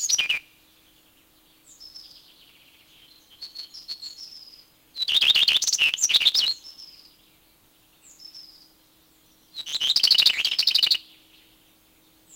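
From start to finish, the sound carries a block size mismatch (truncated). One stage writes blocks that fit 512 samples while the next keeps only the first part of each and drops the rest. The result plays 1.6 times fast at roughly normal pitch, with a 150 Hz buzz from the regular splice points. A spectrogram shows harmonic lines at 150 Hz spacing, and the waveform shows a jump at every block boundary.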